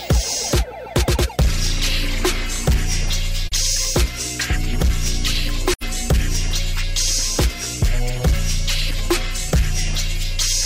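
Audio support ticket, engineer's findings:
Video or display buzz, present throughout: video cable or screen coupling into the audio path. Steady buzz at the 59.94 Hz field rate with hash above it, plus a 15.7 kHz line-rate whine, roughly 20 dB under the programme level.

AAC frame loss with muting at 3.47–3.52 s and 5.73–5.83 s: decoder zeroing the spectrum of missing frames. Soft-edged dropouts, fading out and back in. The lengths fit one lost frame, then two (about 43 and 85 ms of content).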